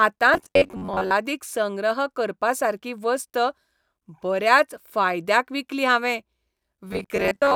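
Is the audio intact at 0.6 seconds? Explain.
No. Robotic sound from repeated short buffers covers 0.34 to 1.12 s. Most of it is likely a 10.7 ms slice looping while real audio is skipped, which imposes a rigid, metallic 93.8 Hz buzz.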